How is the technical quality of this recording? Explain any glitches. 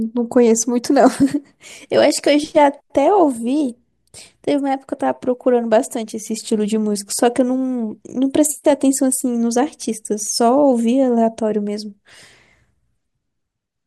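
The technical quality of the recording is sound, with no glitches to explain.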